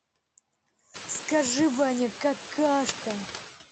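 Noise suppressor artifacts run through the whole speech recording. The suppressor pulls steady background noise down by about 16 dB between phrases and lets it back up under speech, so the residue pumps. A spectrogram shows a patchy, gated noise floor with holes between syllables, and the waveform's gaps look unnaturally flat. Around 1 s the room noise jumps by about 18 dB, to roughly 14 dB below the speech, which makes the pumping easier to hear. Nothing appears above the 8 kHz ceiling of the call codec.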